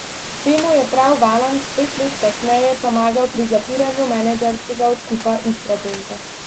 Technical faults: none

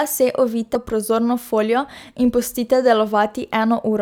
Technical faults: compressed frames skipped

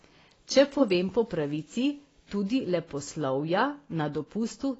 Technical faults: AAC compression; USB whine

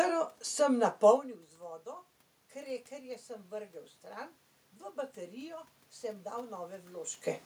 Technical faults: automatic gain rising

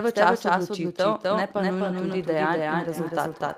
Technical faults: doubled audio track; feedback echo between two devices

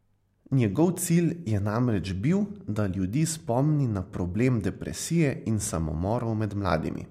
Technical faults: none

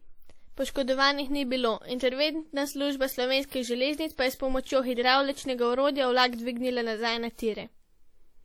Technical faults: WMA compression

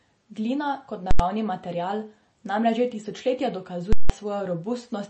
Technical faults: MP3 compression; invalid numbers at full scale

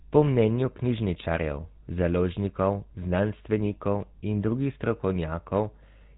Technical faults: GSM full-rate codec

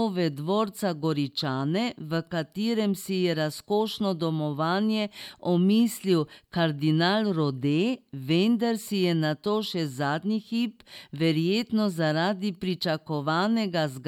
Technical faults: none

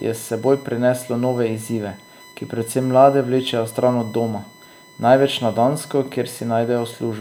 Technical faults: USB whine

